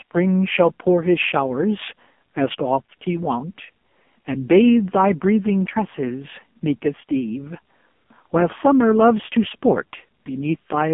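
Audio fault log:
Throughout: AMR narrowband mobile codec. The speech is squeezed into a phone line band of roughly 200 Hz to 3.4 kHz with nothing above 3.5 kHz, and the heavy coding sounds buzzy and synthetic, which fits a low AMR-NB mode around 5.15 kbps rebuilding the voice from a vocal-tract model.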